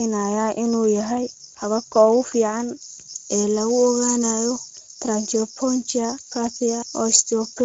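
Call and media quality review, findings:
Speex codec, whole clip: speech noisy and hoarse, with plainly audible coding damage and a hazy, noise-like top end; nothing above 7.6 kHz. Component: sender-side Speex encoder at a middle setting, which the sound suggests is about 17 kbps. Too few bits for the excitation signal; the upper band is only shaped noise fill.

Pre-emphasis left on, 2.83 s to end of clip (7.65 s): sound turns thin, bright and sibilant. Component: capture or transmit stage applying a treble boost without the matching de-emphasis downstream. The curve matches FM 50 µs, about 10 dB up at 10 kHz relative to 1 kHz, so upper frequencies dominate.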